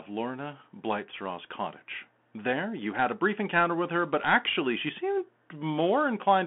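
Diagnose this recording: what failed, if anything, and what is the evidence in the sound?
The codec stage is the culprit here: the whole clip has gone through a Bluetooth CVSD headset codec. The speech sits in a narrow 200 Hz to 3.4 kHz line band, with nothing at all above 3.8 kHz. The damage is plainly audible: scratchy s sounds and a granular hiss under everything. CVSD sends one up-or-down bit per sample with an adapting step, which fits a 64 kbps stream, and loud high content outruns that step and distorts.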